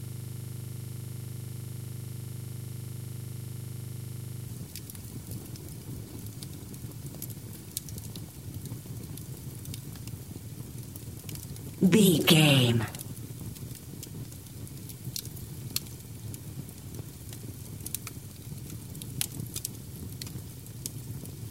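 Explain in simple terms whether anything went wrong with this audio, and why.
From the very start until 4.48 s, a system hang loop: the computer stalled while the sound hardware kept replaying one 40 ms slice of audio over a hundred times. At 25 repeats per second, this comes across as a steady, rough buzz rather than normal sound.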